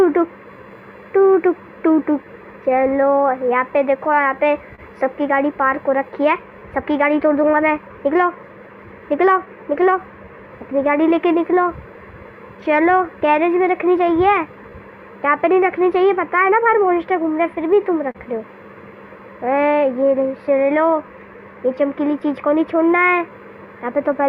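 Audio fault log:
Throughout: clock drift between sender and receiver. The sender's clock runs roughly 3 percent slow, so the receiver's jitter buffer keeps draining. On a waveform the events come slightly later than a steady clock predicts, and the lag grows across the clip instead of staying fixed.
0.26 to 23.98 s: repeated timing corrections. The receiver keeps repeating short pieces to make up for the slow sender. This adds around 0.7 s and plays the audio at 98 percent speed. It is heard as a slightly dragging, uneven tempo, and a spectrogram shows small, irregularly spaced duplicated slivers.
4.75 to 4.80 s and 18.11 to 18.17 s: short stall from a late packet. The buffer ran empty, and the last sound was stretched for 28 ms and then 35 ms until the packet arrived. Nothing is lost. A spectrogram shows frozen, smeared partials with a faint buzz or dip in level.
9.12 to 11.19 s and 20.87 to 24.16 s: scattered short gaps. 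Roughly five and then four lost or late packets were each patched by continuing the last sound, with each patch about 10 ms at most. They are heard as brief ticks, and a waveform shows small repeated-cycle blips at the edges of each patch.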